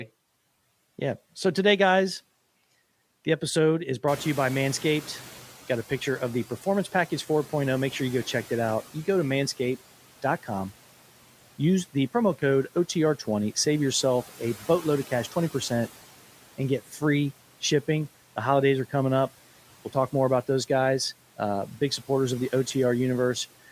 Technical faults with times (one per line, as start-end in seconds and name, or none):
4.07-8.82 noise suppressor catching up